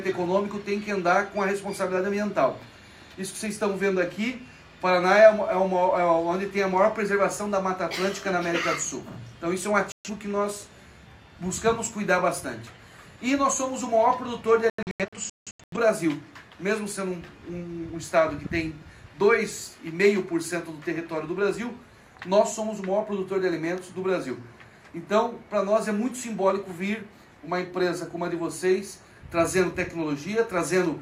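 At 9.92 s the audio mutes for about 0.13 s, returning at 10.1 s, a digital broadcast dropout where the receiver silenced corrupted frames. A second, longer episode runs from 14.70 to 15.77 s: roughly 0.6 s of sound is lost as several short holes scattered across about a second, the longest near 0.17 s. The waveform shows flat-line gaps; the spectrogram shows clean vertical blank columns.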